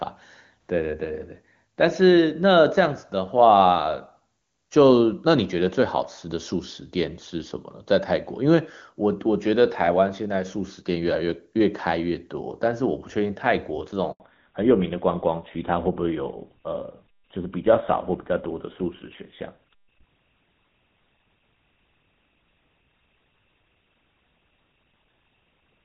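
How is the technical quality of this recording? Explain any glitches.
The recording has two linked glitches about 14 seconds in: a brief dropout followed by a lasting loss of bandwidth. Before that, the speech is wideband and clean, which fits AMR-WB at its highest rate.

The first is a handover gap from 14.12 to 14.20 s, lasting 80 ms. The call was passed from one network link to another, and no speech frames arrived while the switch happened. The voice fades within a few tens of milliseconds, goes silent, then resumes on the new link. Anything spoken in that window is gone. On a waveform it shows as a short flat stretch. On a spectrogram it is a narrow, fully blank vertical strip across all frequencies.

The second is a fallback to narrowband, from 14.20 s to the end. After the handover, the call no longer carried HD Voice and dropped to an older narrowband codec, one that fits GSM full rate. 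From then on nothing is present above 4 kHz. The speech sounds duller and muffled, and it gets rougher. A spectrogram shows this clearly. Energy that reached near 7 kHz before the gap is cut off by a flat horizontal ceiling at 4 kHz, starting right at the gap.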